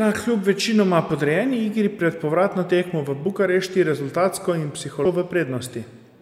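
At 5.04 s the speech is interrupted by a brief glitch, typical of damaged data in a compressed stream: corrupted bytes make the decoder misread a frame, lose sync and resume at the next valid frame header, leaving a short blip.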